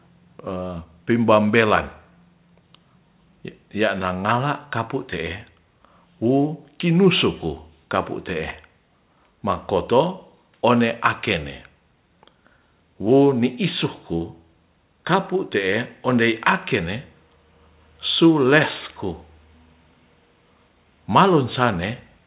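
No audible technical faults.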